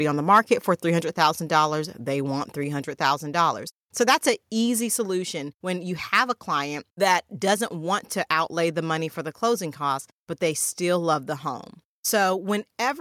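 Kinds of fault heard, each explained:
Microphone overload: just after "on the", peak tops flatten into a brief harsh crackle, likely from input gain about 2 dB too high, unlike steadier codec grit.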